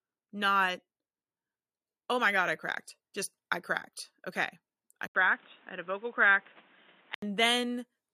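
At 2.46 s, between "oh my" and "I cracked", the microphone volume is stepped up by about 4 dB, lifting the speech and background together, a clean step in the waveform envelope. From 5.07 to 7.22 s the sound turns dull and boxy, likely the input switched to a poorer device: an 80 ms gap, a narrower band, new noise well below the speech, level roughly unchanged.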